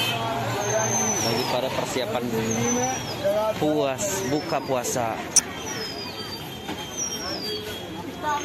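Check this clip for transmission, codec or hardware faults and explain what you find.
One fault is present.

Damaged data in a compressed stream, 5.36 to 5.39 s: corrupted bytes in the encoded stream make the decoder misread those frames and lose sync until it locks onto the next valid frame header. The sound breaks up briefly, for about 34 ms.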